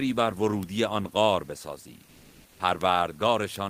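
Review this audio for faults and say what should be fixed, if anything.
There are bit error spikes at 0.63 s, 2.81 s and 3.56 s. Each is a single hard tick, broadband and unrelated to the speech. A flipped bit throws one sample, or at 2.81 s a short run of about three, off by a power of two before it snaps back. Adding error checking (CRC or ECC) on the memory or digital link that carries the samples would stop these.

Comfort noise in place of the background runs from 2.05 to 2.59 s. For about 540 ms the real room noise, which sits about 36 dB below the loud speech, gives way to a smoother noise of a different tone, and the level shifts by about 4 dB. The likely cause is discontinuous transmission of the kind Opus DTX uses: the sender goes quiet during the pause and the receiver fills the gap with synthetic noise. Turning DTX off on the sending side would keep the real background through pauses.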